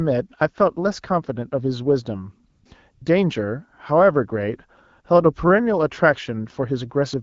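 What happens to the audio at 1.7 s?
Nothing goes wrong at 1.7 s: the speech there comes through intact, carried cleanly by the AMR wideband (HD Voice) codec at 12.65 kbit/s.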